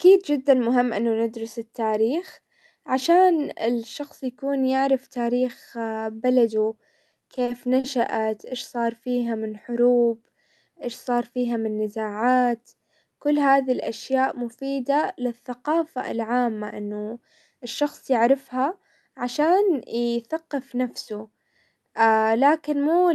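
Speech heard through a call codec, with coding noise and high frequencies cut off around 12 kHz, has three jitter-buffer faults. Between 7.11 and 7.86 s, just before "ايش صار", the sound drags and catches in a repeated stall, or stutter: five short hiccups, the longest 40 ms, adding 100 ms of held-over sound with nothing lost. Packets were arriving late, so the buffer kept running dry and the receiver stretched the last sound to bridge each gap. From 9.08 to 9.75 s, right after "ايش صار", the speech slows to 91% of its pace at unchanged pitch, with drawn-out sounds. This is a jitter buffer slow-down: the receiver repeated single pitch periods to rebuild its reserve, adding 65 ms. From 11.78 to 12.23 s, after "ايش صار فيها", the opposite happens: the speech runs at 109% and sounds hurried, again at the same pitch. This jitter buffer speed-up came from the receiver trimming about 50 ms of pitch-period slices to shed excess buffered delay.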